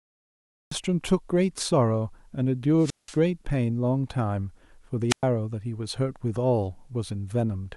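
The recording began late, a cut-off start: the opening 0.71 s is digital silence, and the speech begins abruptly at 0.71 s, already mid-sound, with no natural attack or fade-in.

Twice the analogue FM radio link from the wireless microphone fades far enough that the receiver's squelch mutes its output, causing a wireless microphone squelch dropout. Each time a brief rise of hiss leads into a hole of near silence before the speech returns. The first runs from 2.79 to 3.16 s with about 180 ms fully muted, and the second from 5.09 to 5.23 s with about 110 ms muted.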